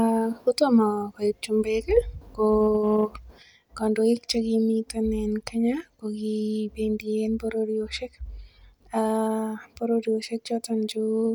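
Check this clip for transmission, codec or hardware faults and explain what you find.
One fault is present, a channel dropout affecting the speech from 3.43 s to the end of the clip. At 3.43 s one stereo channel drops out and stays lost, likely through a failed link or connector on that side. Once the two channels are summed to mono, anything common to both falls abruptly by about 6 dB, and anything carried only by the missing side vanishes. Unlike a simple gain drop, which lowers everything equally, this can also strip away that side's content.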